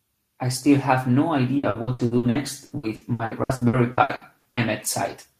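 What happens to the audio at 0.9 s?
Nothing goes wrong at 0.9 s; the speech carries on intact through that moment, with no dropout, click or other fault.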